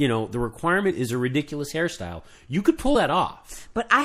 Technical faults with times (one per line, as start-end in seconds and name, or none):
0.00-4.05 MP3 compression
0.90 compressed frames skipped
2.94 compressed frames skipped